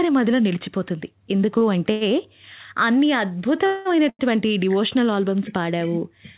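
At 1.58 s and 1.91 s the speech has a short stall from a late packet. The jitter buffer ran empty, so the last sound is held for 31 ms and then 98 ms with a slight buzz or dip before continuing intact. At 3.66 s a call audio freeze stretches the sound into a fading buzz or hiss for 194 ms, likely because packets were held up in transit, then picks up where it stopped. A third late-packet stall at 4.09 s holds the sound for 98 ms.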